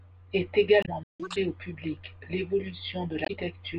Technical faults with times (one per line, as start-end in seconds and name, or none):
0.80-0.89 damaged data in a compressed stream
1.03-1.20 playback stall
1.20-1.36 catch-up at higher speed
3.22-3.30 damaged data in a compressed stream